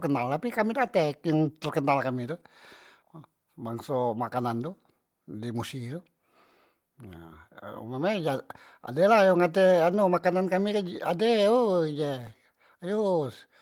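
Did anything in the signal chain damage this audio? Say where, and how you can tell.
No, nothing damaged this audio.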